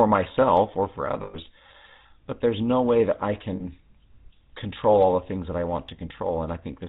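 Throughout, the speech carries the buzzy, gravelly roughness of the GSM full-rate codec. Its pulse-driven vocal-tract model leaves an empty spectrogram above 4 kHz and coarse harmonics, which fits a 13 kbps full-rate stream.

At 1.22 to 1.39 s, after "myself or for", and again at 3.56 to 3.63 s, after "no way that I", lost GSM frames were patched by repeating the last good frame. Each gap sounds like a brief metallic ring, shown as smeared, frozen bands.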